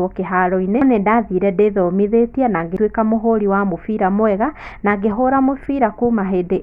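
At 0.82 s, just before "nĩndathire ndĩthomithetie na", and again at 2.77 s, before "mũhuri wa mũbira mwega", compressed frames are skipped. The speech jumps ahead by about half a second, then a tenth.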